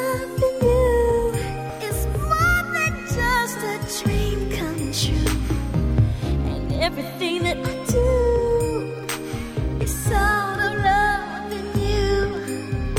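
At about 1.69 to 1.71 s there's a skip ahead: roughly 0.4 s of sound got dropped, so playback lurches forward, splicing both sides together with no gap.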